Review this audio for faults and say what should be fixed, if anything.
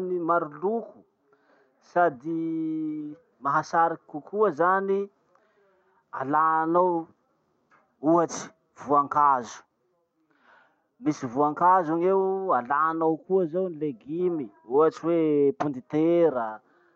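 No faults turn up in this speech audio, so nothing needs to be fixed.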